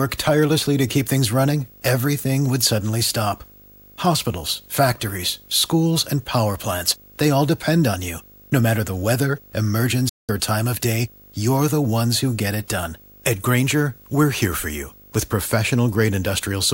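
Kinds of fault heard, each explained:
Video or display buzz, throughout: a screen or video cable is coupling into the audio path, laying a buzz at the 50 Hz field rate under the whole speech clip, with a spread of hash above it and a thin, very high line-rate tone at 15.6 kHz. The interference sits around 30 dB below the speech, so it stays behind the talker but never goes away, even in pauses.
Digital broadcast dropout, 10.09 to 10.30 s: the receiver stopped getting usable digital frames and muted until valid ones returned. The sound fades out in about 8 ms, stays silent for roughly 192 ms, which fits about six lost frames, and then picks up again just before "or time of day". Whatever was sent during that gap is gone and cannot be recovered from the clip.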